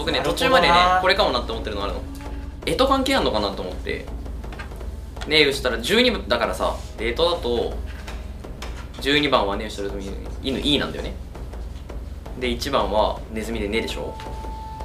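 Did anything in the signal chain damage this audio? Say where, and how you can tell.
No, nothing along the chain from capture to playback has left a mark that can be heard in this audio. There is no stage to point to and no moment in the clip where the signal gives way.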